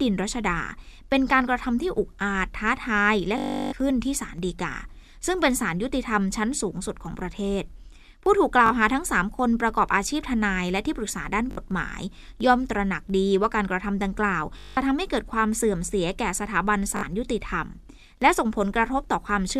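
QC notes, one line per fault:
3.38–3.73 s, 8.66 s, 11.51 s, 14.59–14.77 s and 16.97 s, Bluetooth stutter: the speech catches and buzzes each time, longest at 3.38 s (about 345 ms, roughly seventeen 20 ms packets gone) and 14.59 s (about 183 ms), with short hiccups of 41 to 61 ms at the others. The receiver ran dry and kept replaying its last short slice, hence the machine-gun rattle. Speech then picks up further along, skipping the lost stretch.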